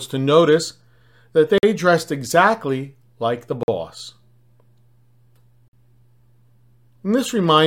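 At 1.58, 3.63 and 5.68 s the speech stops dead for 50 ms, a gap between chunks recurring every 2 s of audio. The first falls just before "dressed exactly like the" and the second just after it. Silence is inserted at each chunk join, so nothing is lost but the flow breaks into hard-edged holes. A waveform shows flat silent stretches, and a spectrogram shows narrow blank vertical bands with abrupt edges.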